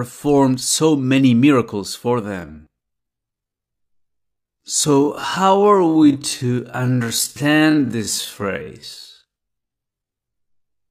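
At 2.18 s, right after "so many miracles for", the pace suddenly drops. From there to the end, at 10.90 s, is a time-stretched section. The speech runs at about 0.51 times its normal speed, nearly half. The pitch does not fall with it. The likely cause is software lengthening the audio to fill a set duration by repeating short pieces.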